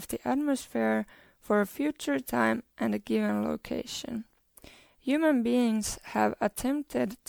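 Throughout, the speech sounds swirly, hollow and smeared, with blurred attacks. This is likely generation loss from about five MP3 passes, fitting 96 kbit/s.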